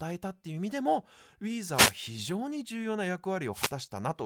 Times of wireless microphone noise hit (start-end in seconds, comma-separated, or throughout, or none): 1.72-1.94, 3.52-3.71